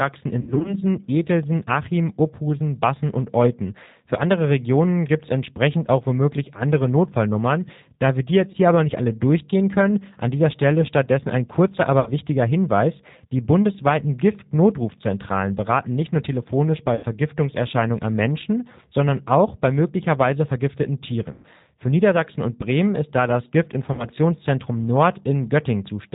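From the start, the whole recording carries the sound of the G.729 codec at 8 kbit/s. The damage is plainly audible. Everything above 4 kHz is gone, so the sound is dull and boxy. The speech is rebuilt from a vocal tract filter, a pitch predictor and a few pulses per frame. It comes out intelligible but rough, with a slightly synthetic, buzzy edge.

VoIP packet loss concealed by the speech codec first appears from 0.41 to 0.75 s. Here 120 ms of audio is missing, scattered over 240 ms, and the longest gap is 60 ms. That points to about six lost 20 ms packets. The decoder fills each gap by repeating its last pitch and filter at falling gain. The result is a smeared, buzzy tone that sags, and the voice stays weak for a moment after.

The same concealment returns at 8.52 to 8.56 s, a single 20 ms gap that is heard as a brief blur. It appears again at 12.00 to 12.11 s, with 60 ms lost. At 16.95 to 17.06 s, 80 ms is lost. 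At 21.32 to 21.47 s, 120 ms is lost. At 23.93 to 24.07 s, 60 ms is lost. The longer gaps stretch into a fading hum before the sound recovers.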